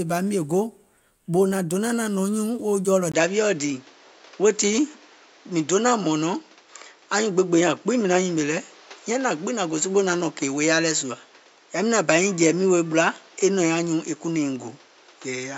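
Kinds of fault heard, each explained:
Input switched to a poorer device: the recording path likely changed its input partway through, moving to a lesser microphone or headset link. From 3.12 s, after a brief gap of about 20 ms, the speech loses everything above 7.6 kHz, so it sounds duller and more boxed-in to the end. The loudness stays much the same, but a new background noise floor appears, sitting roughly 30 dB below the voice.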